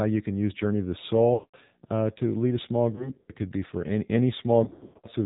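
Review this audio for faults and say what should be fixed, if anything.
Buzzy, synthetic speech with nothing above 4 kHz runs throughout. This is the AMR narrowband mobile codec at 7.4 kbps, whose low bitrate leaves the vocal-tract model plainly audible.

Lost AMR speech frames cause three breakups, each where the decoder stretches stale pitch settings with falling gain:

After "of the", from 1.34 to 1.57 s, the sound drags out and fades nearly to silence before "uh to lead a". This fits about 200 ms of consecutive loss.

After "to lead a small", from 2.96 to 3.32 s, there are scattered short dips and warbles.

After "could be for any", from 4.64 to 5.07 s, repeated smeared fades occur, the longest about 120 ms.

To prevent these faults, carry the call over a stronger radio link with better error protection and a higher AMR mode or a wideband codec.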